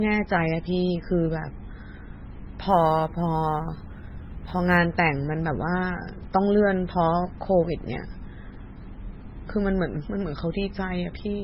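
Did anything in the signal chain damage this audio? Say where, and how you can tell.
Yes, at two points. The whole clip is speech with nothing above 5.6 kHz and a heavy watery, swirly quality, which is most likely MP3 compression at the codec stage. That treble cutoff and the level of damage suggest a very low bitrate, around 16 kbps, where the encoder drops the top band and starves weaker frequency lines.

Then from 2.69 to 4.77 s there's a fine roughness riding on the speech, strongest on louder, brighter moments. That's sample clock jitter at the converter. The clock wobbles by a few microseconds, so samples land early or late, and the error sits at roughly 40 dB below the signal.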